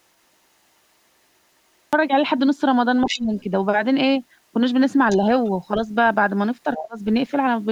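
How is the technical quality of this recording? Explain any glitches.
The recording has three kinds of glitches: a late start, leakage of the far-end talker, and dips in the near talker during overlap.

Cut-off start, at 1.93 s: audio begins abruptly from digital silence mid-sound, with no attack or fade, because capture started late.

Other side's voice leaking through, at 3.05–3.2 s, 5.09–5.16 s, 5.45–5.51 s and 6.75–6.82 s: brief scraps of a second voice, strongest at 3.05 s and faintest at 5.45 s, likely loudspeaker echo the canceller missed.

Speech suppressed in double talk, at 3.05–3.37 s and 6.65–6.97 s: the main voice drops sharply, by roughly 20 to 30 dB, as both sides overlap, likely the echo canceller ducking everything.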